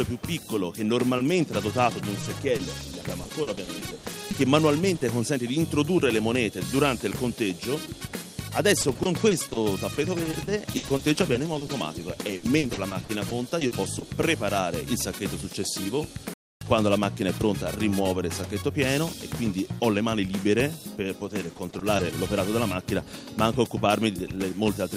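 From 1.17 to 5.03 s, 8.73 to 14.03 s and 21.25 to 22.05 s, repeated packet loss leaves short holes of up to 60 ms, patched by repeating prior sound. It sounds choppy, with smeared, repeated spectrogram slices. At 16.34 s a playback stall of about 0.28 s, likely from starved playback, drops the waveform to flat silence.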